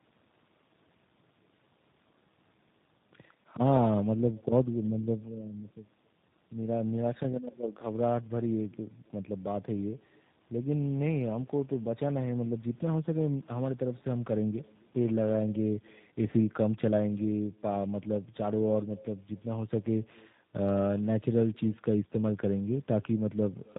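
The speech across all 24 seconds is shadowed by a faint, thin copy of itself arriving roughly a third of a second after each phrase, sitting about 29 dB below the direct sound. That is echo with no canceller: the far end plays the call through a loudspeaker, its microphone captures it, and nothing strips it out, so the talker's own sound returns after the network round trip. Throughout, the speech is also rough, muffled and warbly, with nothing above 3.8 kHz. This points to tandem speech coding, where the call was decoded and re-encoded at each link boundary. The character of the damage fits a chain ending in a low-rate codec such as G.729A at 8 kbit/s after an earlier ADPCM stage, each coder compounding the errors of the one before.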